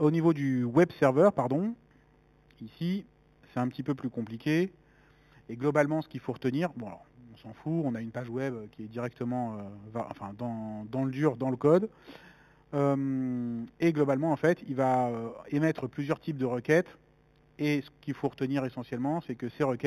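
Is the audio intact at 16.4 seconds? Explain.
No. At 16.4 s the audio carries imaging from linear upsampling, as it does through the whole clip. The rate was raised by joining the original samples with straight lines. That acts as a weak filter. The band tops out near 4 kHz, which fits an 8 kHz source. A faint mirrored copy of the spectrum sits between 4 kHz and 8 kHz, roughly 30 dB below the signal. It adds a light metallic shimmer to the top end.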